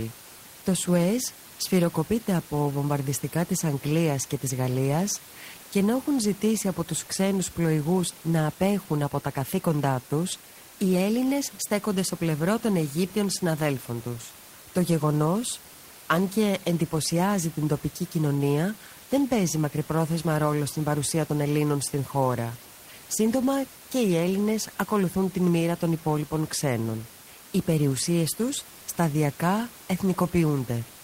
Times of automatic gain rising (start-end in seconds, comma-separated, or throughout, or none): none